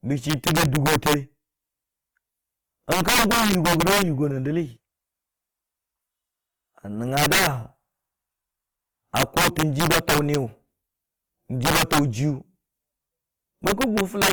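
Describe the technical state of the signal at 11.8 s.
At 11.8 s the signal sits inside an integer overflow running from 11.65 to 11.99 s. The level was pushed about 10 dB past what the integer format can hold, and instead of being limited, the arithmetic wrapped around: every peak over the ceiling flipped to the opposite extreme of the range. The speech there breaks into harsh, violent cracks on its loudest moments, far sharper and more splintered than ordinary clipping.

Underneath, the same moment carries the grain of lossy coding, likely Opus in its music-oriented CELT mode at a low rate, around 24 kbps. With too few bits, bands are filled in rather than left empty, so the speech sounds rough and noisy instead of swirly, while the bandwidth stays full, with content reaching about 20.2 kHz.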